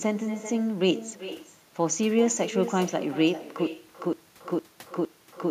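From the start there's echo with no canceller: your speech returns about 13 dB down, roughly 0.4 s later, thin, as a far-end loudspeaker feeds its microphone. At 3.67 s a stutter with silent gaps takes over to the end, with a 146 ms fragment replaying four times, 314 ms of dead silence between, likely a stalled stream retrying.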